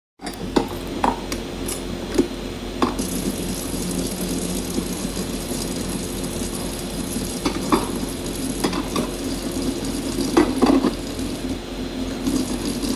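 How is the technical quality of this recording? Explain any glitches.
Listening closely to these sounds, nothing stood out as a technical glitch or problem anywhere in the recording.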